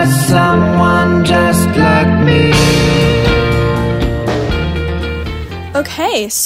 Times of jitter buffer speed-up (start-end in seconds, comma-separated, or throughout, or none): none